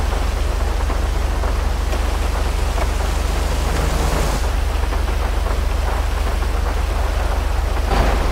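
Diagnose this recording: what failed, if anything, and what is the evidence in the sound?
Nothing stood out on listening that would point to a failure at any stage of the chain.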